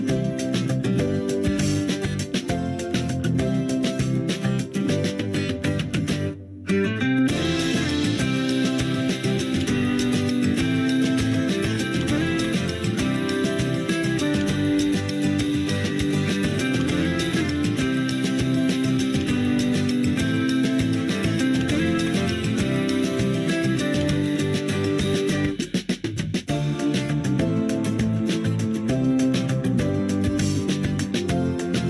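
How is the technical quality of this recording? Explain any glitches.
No audible glitches or faults.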